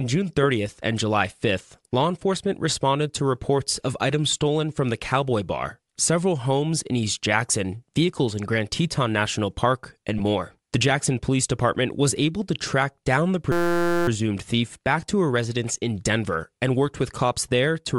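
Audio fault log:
Throughout: Bluetooth LC3 compression. The speech has a breathy, grainy edge across the whole clip, and the top of the spectrum sounds thin and hissy rather than detailed. This is likely low-bitrate LC3 coding: the encoder discards much of the upper band and the decoder fills those gaps with shaped noise. The damage is plainly audible and is consistent with 7.5 ms frames at a rate around 48 kbps.
10.18–10.21 s: lost LE Audio frames. A brief patch of about 15 ms turns into a noisy smear instead of clean speech, which fits two consecutive missing frames. The decoder conceals the gap by replaying the last good spectrum with randomised phase signs. The result keeps roughly the right tonal balance but loses all structure. The gap is short enough that no fade toward silence is heard.
13.52–14.08 s: system hang loop. Between "to track down the" and "thief back to a", the speech is replaced by a steady buzz. 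A 5.8 ms fragment repeats exactly, giving a fundamental near 172 Hz. This fits a 256-sample buffer that the audio hardware kept cycling while the host stalled, about 96 passes in all. Speech resumes at the point where it stopped, so essentially no audio is lost.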